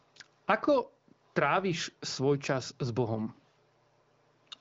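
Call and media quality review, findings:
No faults heard on the HD Voice wideband path.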